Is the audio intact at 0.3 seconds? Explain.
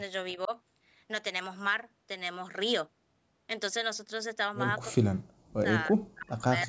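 No. From 0.34 to 0.52 s the speech dips by roughly 10 dB in short pieces, about a tenth of a second in all. This is likely speech suppressed in double talk. The echo canceller mistook overlapping talk for echo and turned the speech down.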